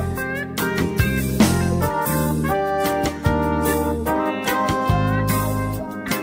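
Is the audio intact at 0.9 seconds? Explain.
Yes, the audio at 0.9 seconds is intact, with no dropout, click, distortion or other fault at that moment.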